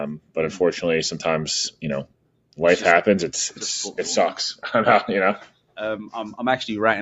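A noise suppressor built for speech is applied to this music or sound material throughout, treating sustained tones and decays as noise. Its gain rides up and down by around 10 dB, so attacks pass while held sound sinks, giving a pumping, thinned texture within the 8 kHz call band.

The noise suppressor cuts this sound three times: 0.17 to 0.36 s, 2.04 to 2.59 s, and 5.44 to 5.78 s. In each stretch the steady material drops by as much as about 18 dB, so the sound briefly hollows out and its tail is clipped short.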